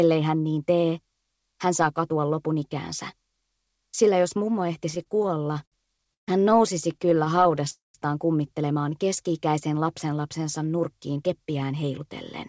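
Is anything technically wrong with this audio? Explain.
Yes. The audio stalls, freezes and then rushes. Throughout, the sound has the band limit of a wideband call codec, with nothing above 8 kHz, which fits G.722 at 64 kbps.

Repeated stalls (stutter) occur from 4.90 to 6.29 s and again from 6.93 to 7.68 s. Packets arrived late or more slowly than they were played, so the jitter buffer kept running dry. Each time, the receiver stretched the last sound to bridge the wait. In the first stretch, about a quarter of the time is filled this way, and the longest hold lasts 132 ms. The second stretch has many tiny holds of at most 14 ms. Nothing is lost, but the sound drags and stutters.

A call audio freeze follows from 7.70 to 7.96 s. The likely cause is packets held up in transit, which emptied the jitter buffer. The receiver extended the last sound as a fading buzz that drops to silence for about 160 ms. 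Playback then resumes where it stopped, having inserted a gap of roughly 240 ms.

A jitter buffer speed-up runs from 10.94 to 12.02 s. With excess audio queued, the receiver repeatedly cut out pitch-period-sized slices, about a tenth of a second in total. This plays the sound at 110% speed without changing its pitch, so it sounds hurried.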